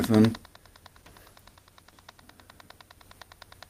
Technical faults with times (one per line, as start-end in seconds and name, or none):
0.92-2.27 call bitrate drop